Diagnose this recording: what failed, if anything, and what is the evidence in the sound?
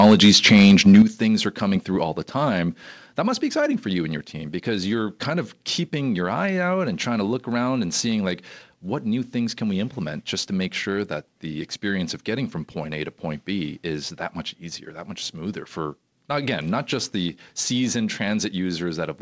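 Microphone overload from 0.00 to 1.02 s, at the converter stage: the loudest syllables sound harsh and crackly, with flattened tops on a few percent of samples, pushing about 4 dB past full scale. The likely cause is input gain set too high, so peaks exceeded the converter's range and were sheared off.

Microphone volume stepped down at 1.02 s, in call processing, just before "things are coming through": speech and background both drop abruptly by about 8 dB right after the clipped opening. This points to the call software's automatic gain control reacting to the overload and lowering the device input in one step, while the call codec carries nothing above 8 kHz.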